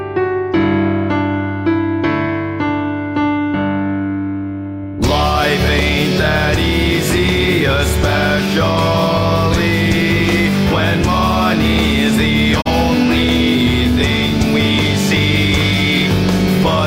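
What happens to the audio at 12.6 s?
At 12.60 s the sound fades out over about 20 ms and drops into a brief hole of silence, returning by 12.68 s. This is a digital broadcast dropout: the receiver muted after bad or missing data, and the roughly 32 ms gap fits a single lost frame.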